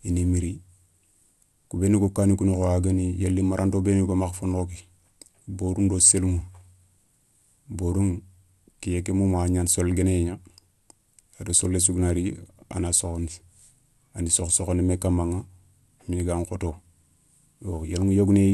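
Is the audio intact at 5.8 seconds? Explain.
No. At 5.8 s, as throughout, the speech carries MP2 compression damage: starved upper sub-bands shut off above 12.2 kHz, likely from coding at around 80 kbps, leaving dull, gurgling distortion.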